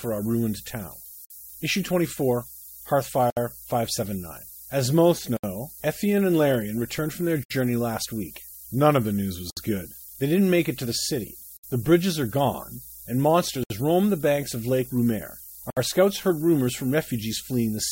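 A steady, thin hiss that climbs toward the top of the band runs the whole way through. That's low bit depth with noise shaping: the speech sits on about 7 bits, with the rounding noise pushed upward, roughly 15 dB under the signal. Then there are gaps at joins of encoded pieces at 1.25, 3.30, 5.37, 7.44, 9.50, 11.57, 13.64 and 15.70 s, one every 2 seconds. Separately encoded chunks were stitched together untrimmed, so encoder delay and padding leave silent holes: 53 ms for the first, about 67 ms after that. The one at 13.64 s falls between "bridges are gone and" and "roam the banks of", and the speech picks up right where it broke off.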